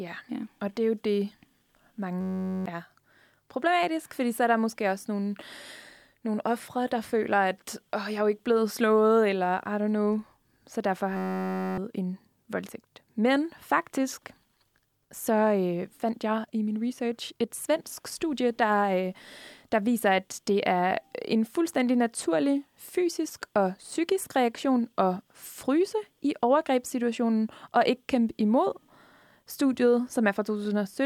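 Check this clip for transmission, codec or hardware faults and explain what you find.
There's a system hang loop in two places. At 2.21 to 2.66 s, and again at 11.17 to 11.78 s right after "know så derfor" and before "en voldtægt", the machine stalled while the sound hardware kept replaying one tiny 10.67 ms slice, which fits a 512-sample buffer. That slice repeats at 93.8 Hz, giving a steady buzz rather than a stutter. Roughly half a second of speech is lost the first time, and closer to three-quarters the second.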